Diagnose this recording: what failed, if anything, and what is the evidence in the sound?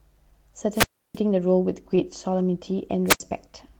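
Wireless microphone squelch dropout in the analogue radio link occurs twice, at 0.72 to 1.19 s and at 3.06 to 3.20 s. Each time the FM carrier weakens, hiss rises, and the receiver's squelch gates the output to near silence for about 0.32 s and then about 0.08 s before the speech returns. A spectrogram would show broadband noise swelling across the band, then a blank vertical gap. The waveform would flatten to almost zero.

Short concealed packet loss occurs in the network path between 1.95 and 1.99 s. About 20 ms of speech never arrived, and the decoder's concealment extrapolated roughly 16 ms from the preceding sound before cross-fading back into real audio. It is heard as a brief smear or wobble. On a spectrogram that sliver would continue the preceding sound unnaturally evenly, then blend back into the real audio.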